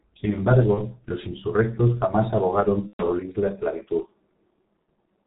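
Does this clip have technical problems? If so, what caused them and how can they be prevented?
Yes. The speech has passed through a G.723.1 codec, an early internet-telephony coder working in 30 ms frames at a very low rate. The heavy damage points to about 6.3 kbit/s. Nothing above 4 kHz survives, and the slowly updated voice model leaves the speech muffled and hoarse throughout, with smeared consonants. Using a wideband, higher-rate codec such as Opus would prevent this.

There is also VoIP packet loss concealed by the speech codec, at 0.75 to 0.81 s, just before "los insurrectos jamás abogaron", and at 2.87 to 3.03 s, between that phrase and "la esclavitud". When packets went missing, the decoder extended its last pitch and filter with falling gain. About 30 ms was lost the first time and about 120 ms the second, so the second gap is the longer fading stretch, muted from its third lost frame, and the voice stays weakened for a short time after each one. 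A jitter buffer, forward error correction, or a less congested network path would reduce the loss.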